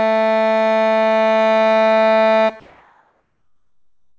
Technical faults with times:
2.60-4.18 comfort noise in place of the background

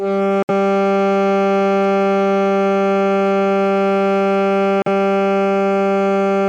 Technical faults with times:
0.43-0.50 Bluetooth dropout
4.82-4.88 Bluetooth dropout

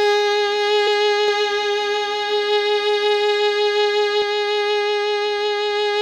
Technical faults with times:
0.86 damaged data in a compressed stream
1.28-4.22 doubled audio track

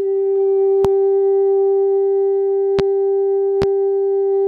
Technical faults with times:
0.85-0.88 loud pop
2.79-2.82 loud pop
3.62-3.65 loud pop

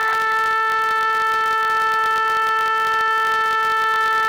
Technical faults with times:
0.00-4.28 filter restarted on every block

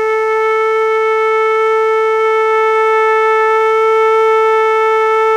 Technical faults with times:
0.00-5.37 mains buzz

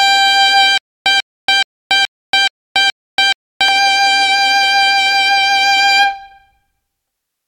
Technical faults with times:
0.78-3.68 stutter with silent gaps

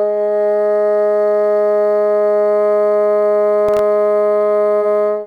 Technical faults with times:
3.69-3.79 processor overload crackle

